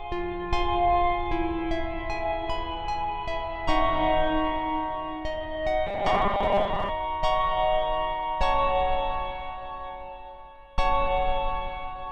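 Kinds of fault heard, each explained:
Robotic sound from repeated short buffers, 5.87 to 6.90 s: the sound turns into a rigid, metallic buzz fixed at 200 Hz, which fits a 5 ms segment being replayed, likely because new audio arrived too seldom, so about half the real material is skipped.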